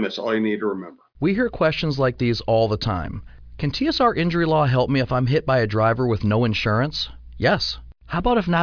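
No technical faults can be heard in this speech recording.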